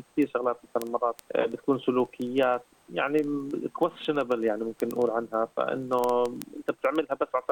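Ticks every 50 ms or so from 0.12 to 7.49 s: word clock ticks, from an unlocked receiver clock roughly 400 ppm off slipping one sample each time.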